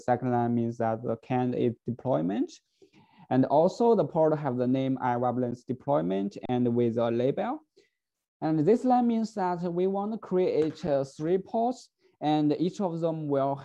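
Three times the output buffer ran dry and the converter froze on its last sample, producing an underrun with held sample: at 5.51 s for 10 ms, from 6.46 to 6.49 s for 35 ms, and at 10.87 s for about 5 ms. During each, the waveform sits flat, so the audio simply stops without a sharp click. Since virtually nothing was lost and playback picks up where it paused, each resumes with only a soft edge, the longest gap being a brief stall.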